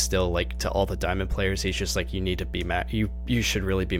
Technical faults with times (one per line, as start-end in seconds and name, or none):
0.00-3.99 mains hum